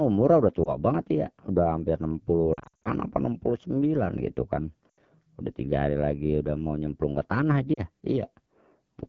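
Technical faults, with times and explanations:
throughout: AMR wideband (HD Voice) codec. The speech sounds rough and raspy. The rasp fits AMR-WB running at one of its two lowest rates, likely the 8.85 kbit/s mode. At that rate the pulse-driven vocal tract model has too few bits to describe each sound, and the band from 6.4 to 7 kHz is filled with shaped noise rather than coded detail.
0.64–0.76 s, 2.54–2.88 s, 4.90–4.98 s, 7.74–7.80 s: lost AMR speech frames. At 0.64 s there is a brief dip or warble, about 20 ms of missing sound. From 2.54 s the sound repeatedly drops out over about 320 ms, roughly 220 ms of it missing, with the longest gap near 60 ms. Shorter gaps follow at 4.90 s (about 80 ms) and 7.74 s (about 40 ms). Frames damaged in transmission were discarded, and the decoder repeated the last good pitch and vocal tract settings at falling gain. Each longer dropout therefore falls to near silence within two frames, and the sound returns weak or rough.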